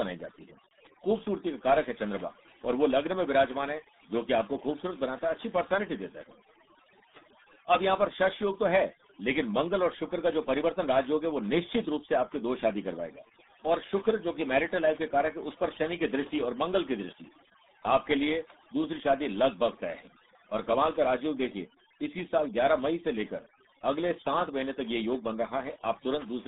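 Overdone noise removal runs through the whole speech clip. A noise reducer set far too hard drives each frequency band down or out whenever its level falls near the estimated noise floor, and the quieter parts of the voice are swallowed along with the noise. Between phrases the background collapses to near silence dotted with twinkling specks. On top of that, RealAudio 14.4 codec damage is present from start to finish. The sound is squeezed into a telephone-like band of roughly 200 Hz to 3.7 kHz, with nothing at all above 3.8 kHz, which fits the RealAudio 1 low-bitrate speech coder at around 8 kbit/s built for dial-up modems. The coding damage is heavy, so the speech comes across muffled and gargly.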